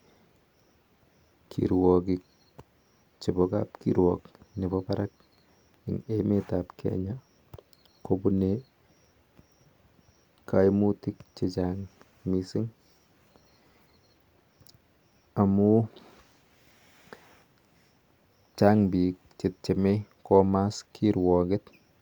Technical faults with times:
none

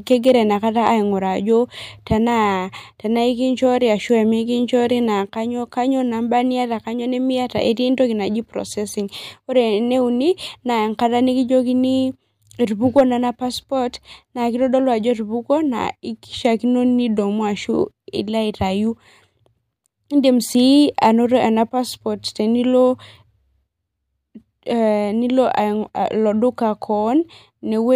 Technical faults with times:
0.12-0.35 hard clipping
12.98-13.01 hard clipping

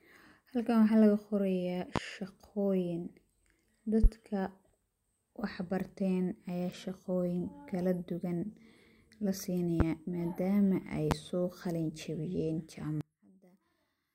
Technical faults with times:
1.96-1.99 loud pop
4.04-4.07 loud pop
9.80-9.84 loud pop
11.11-11.15 loud pop
13.01-14.14 one channel inverted

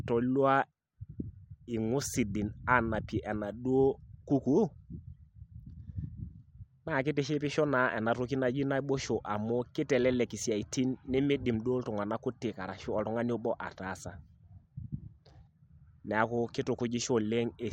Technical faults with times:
none

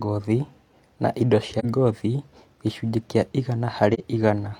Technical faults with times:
1.59-1.65 AAC frame loss with muting
3.93-4.00 AAC frame loss with muting

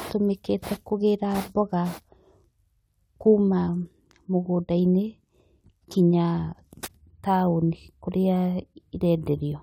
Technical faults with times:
none

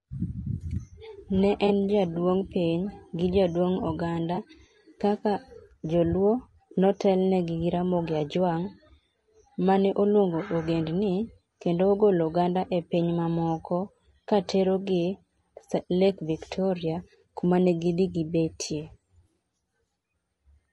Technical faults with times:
0.00-20.72 low-delay AAC compression
1.67-1.70 AAC frame loss with concealment
4.35-4.38 AAC frame loss with concealment

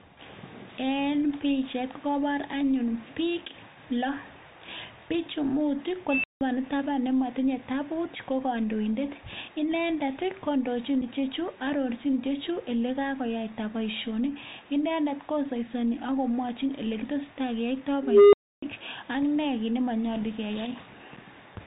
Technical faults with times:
0.00-21.67 Bluetooth CVSD headset codec
6.09-6.41 unstable filter
6.80 dropped samples
11.01 unconcealed Bluetooth headset packet loss
18.03-18.62 unstable filter
21.16 unconcealed Bluetooth headset packet loss

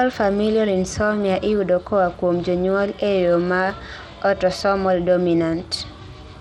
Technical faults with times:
0.00-6.41 Bluetooth SBC compression

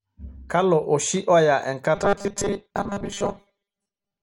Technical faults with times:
1.95-4.22 robotic sound from repeated short buffers

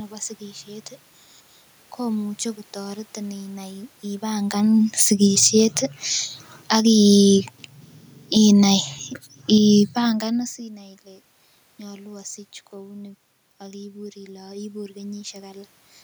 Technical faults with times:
4.85-5.74 automatic gain falling
5.66-6.16 automatic gain rising
6.55-6.85 automatic gain falling
6.78-7.54 automatic gain rising
7.51-10.67 automatic gain falling
10.69-15.75 automatic gain rising

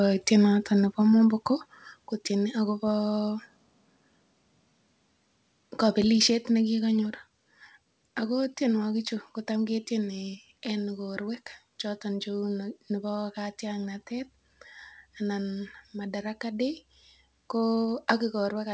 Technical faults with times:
2.04 microphone volume stepped down
6.30 microphone volume stepped down

